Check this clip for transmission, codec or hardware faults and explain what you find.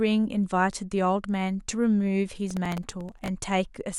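One hardware fault: processor overload crackle from 2.51 to 3.28 s. About twenty very short buffers, around a millisecond or two each, missed their deadlines and were filled with stale audio, so hard-edged fragments produce a gritty tearing over the speech. Unlike steady clipping distortion, it stops abruptly once the load passes.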